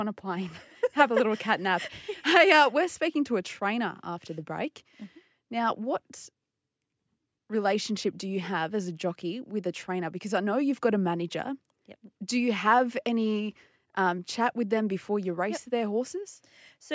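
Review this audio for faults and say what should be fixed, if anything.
Nothing here needs fixing: the speech passed through a call's microphone processing, which trims the lowest bass and leaves nothing above 8 kHz, as expected for that path.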